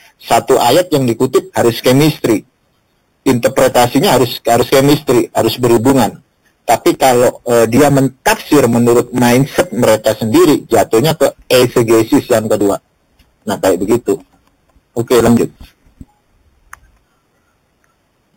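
From start to finish the audio carries imaging from sample-and-hold upsampling. Material at an 8 kHz rate was raised to 44.1 kHz by holding each sample, with no smoothing filter, so mirrored copies of the band appear around multiples of 8 kHz. The lowest copy fills 4 to 8 kHz at about 17 dB below the signal, heard as a bright metallic fizz that follows the level. A spectrogram shows inverted reflections stacked above 4 kHz, and the waveform looks stair-stepped.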